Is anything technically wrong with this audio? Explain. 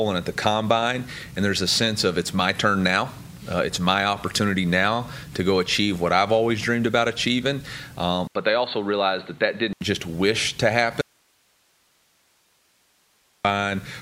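Yes, two faults are audible.

From 8.27 to 9.81 s the input switches to a poorer device, likely a change of microphone or headset profile. After an 80 ms silence, nothing above 4.4 kHz remains, so the sound turns dull over a new faint noise floor. The level barely moves, which separates this from a dropout.

From 11.01 to 13.45 s there is an audio dropout to a faint residue. The signal cuts out abruptly for about 2.4 s while the path likely stays live, leaving only hiss roughly 40 dB down. Unlike a device switch, none of the wanted sound survives.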